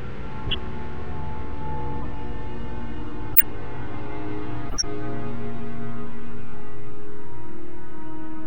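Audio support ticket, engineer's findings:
Corrupt frame decoded, four bursts: 0.46–0.58 s, 2.01–2.05 s, 3.33–3.43 s, 4.69–4.84 s. Chirp/noise blips, each a few frames long, loudest near 3.4 s, faintest near 2.0 s. Decoder played damaged frames; flipped bits misplaced spectral energy.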